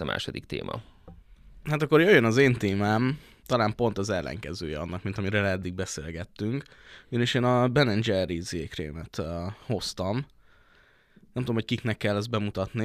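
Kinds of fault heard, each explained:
Nothing here stands out as a technical fault; the speech comes across without any dropouts, clicks, distortion or other glitches worth pointing to.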